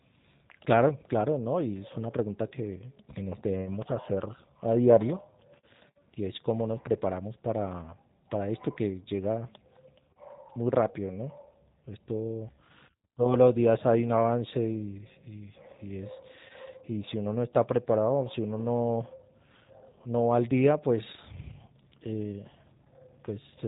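From start to finish the speech carries G.729 codec damage, and it is plainly audible. The codec rebuilds each 10 ms frame from a vocal-tract filter, a pitch predictor and a handful of pulses, so voicing turns slightly buzzy and synthetic, and nothing above about 3.8 kHz survives. The roughness and the frame-rate graininess, which point to an 8 kbit/s G.729A stream, set it apart from a simple low-pass filter, which would only dull the sound.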